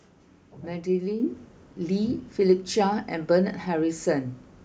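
A microphone volume stepped up fault occurs at 1.2 s: the call software judged the input too quiet and raised the microphone's gain in a single jump of about 5 dB, so the voice and the background noise both become louder at once and stay at the higher level.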